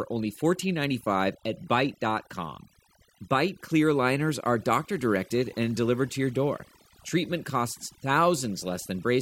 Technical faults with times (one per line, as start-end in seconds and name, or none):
0.00-9.21 overdone noise removal